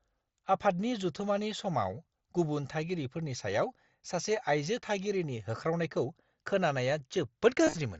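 From 7.65 to 7.75 s there is concealed Bluetooth headset packet loss. About 75 ms of audio went missing across 105 ms, in runs no longer than 22.5 ms. The receiver patched each gap with recent waveform. It sounds like a brief buzzy flutter.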